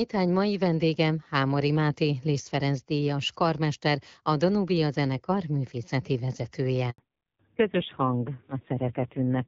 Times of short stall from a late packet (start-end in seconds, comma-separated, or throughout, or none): none